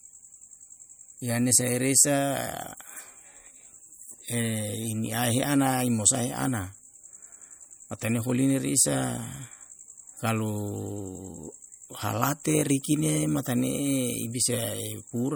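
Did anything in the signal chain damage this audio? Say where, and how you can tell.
Yes. Throughout, the speech sounds watery and swirly with smeared consonants. This is codec-stage damage, likely MP3 compression zeroing weak frequency lines, consistent with a bitrate near 64 kbps.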